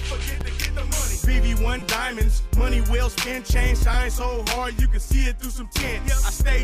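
A repeated buffer occurs at 0.41 s, 1.79 to 1.82 s and 3.94 s. Late audio left the device replaying its last 5.8 ms block, which fits a 256-sample buffer. Single repeats at 0.41 and 3.94 s click; the fourfold repeat at 1.79 s buzzes briefly.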